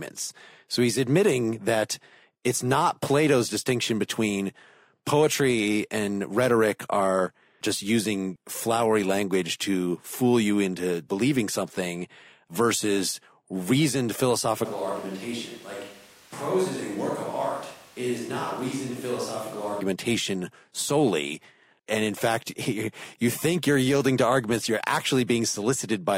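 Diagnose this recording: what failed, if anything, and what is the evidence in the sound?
Likely a switch to a distant microphone at analogue capture. After "believing something versus reasoned", 14.66 to 19.80 s turns abruptly roomy, thin, about 5 dB quieter and noisier.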